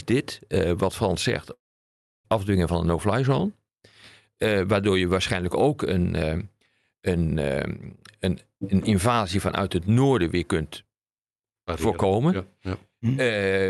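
From 1.53 to 2.26 s the speech drops out for about 0.72 s, most likely a long network dropout where packets stopped arriving and the receiver had to fill the gap. It briefly stretches the last sound into a fading buzz, then leaves near-silence for roughly 0.66 s before speech resumes with that portion missing. On a spectrogram this shows as a smeared, decaying tail and then a blank band. The waveform collapses to a flat line. Through the call path the audio extends to about 12 kHz.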